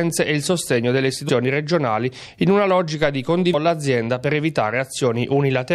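At 1.28 s and 3.53 s, damaged data in the compressed stream makes the decoder lose frame sync and resync, producing brief glitches in the sound.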